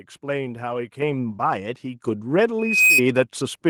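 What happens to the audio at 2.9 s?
At 2.9 s there is loudspeaker feedback squeal, running from 2.59 to 3.02 s: the microphone picks up its own loudspeaker and the loop runs away at 2.5 kHz. Unlike a steady interfering whistle, the tone swells over roughly a third of a second, peaking about 5 dB above the speech.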